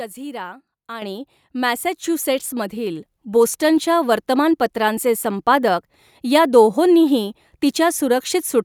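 At 1.02 s the microphone volume is stepped up: the call software judged the input too quiet and raised the device's input gain by about 8 dB in a single step. The speech and the background noise behind it jump louder together, with no ramp.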